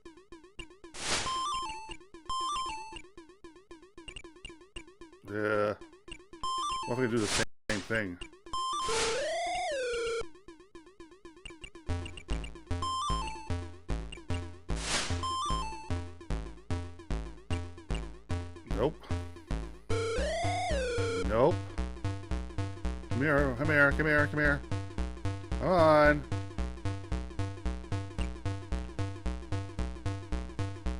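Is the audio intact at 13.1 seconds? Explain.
Yes, at 13.1 seconds the audio runs on intact, with no dropout, click, distortion or other fault.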